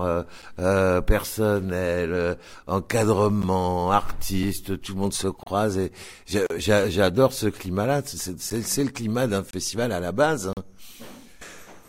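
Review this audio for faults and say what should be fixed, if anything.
Gap between stream segments: the timestamps of consecutive one-second segments don't quite meet, and the player fills each hole with silence. The result is hard-edged dropouts of 4 to 39 ms at 0.42, 3.42, 4.43, 5.43–5.47, 6.46–6.50, 8.50, 9.51–9.53 and 10.53–10.57 s, with no audio lost. To prevent it, have the packager write segment timestamps that line up end to start, so every segment begins exactly where the previous one ends.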